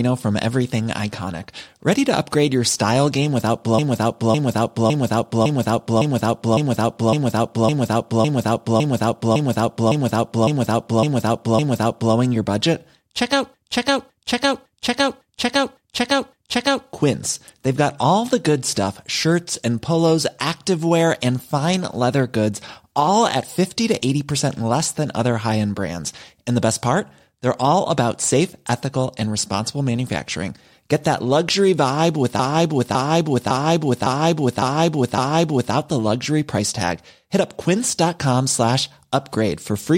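Repeated frames cause three stutters in the speech. From 3.79 to 12.15 s a 0.56 s chunk replays 15 extra times, then 6 extra times at 13.54 to 16.88 s and at 32.39 to 35.74 s. The same run of compressed frames was played again, adding about 15 s.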